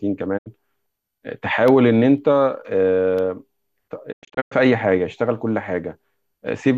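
A digital broadcast dropout at 0.37 to 0.48 s mutes the speech: the receiver lost good frames and silenced output, fading over about 20 ms, so roughly 72 ms of audio vanishes as a short hole, consistent with a few failed frames.

Periodic USB or driver dropouts follow from 1.68 to 3.69 s. Every 0.5 s, a background task stalls the audio path and a sliver of signal, well under a millisecond, is replaced by silence, giving about five evenly spaced ticks heard against the speech.

A second digital broadcast dropout at 4.11 to 4.53 s is more broken up. About 264 ms are lost in several holes spread across 384 ms, the longest about 96 ms, each muting with a 20 ms fade before the sound resumes.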